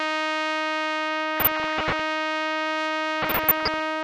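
DAB burbling hits the music from 1.38 to 2.02 s and again from 3.22 to 3.81 s. Bit errors at a low, sub-percent rate slip past error correction and corrupt samples and sub-band levels frame by frame, giving short noise blips in single sub-bands unlike steady codec swirl.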